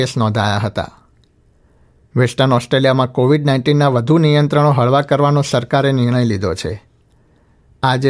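No technical faults are audible.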